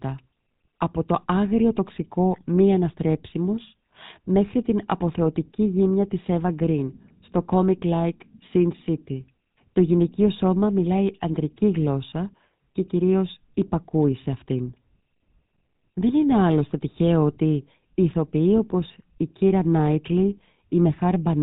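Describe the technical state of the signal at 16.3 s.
At 16.3 s the speech has a buzzy, gravelly roughness, with a muffled top end and nothing above 4 kHz. This is GSM full-rate codec damage, plainly audible here and present throughout the clip. The codec models the vocal tract as a filter and drives it with a coarse train of regularly spaced pulses, keeping only every third excitation sample. That thin excitation gives the grainy buzz, and the sound fits a 13 kbps GSM stream.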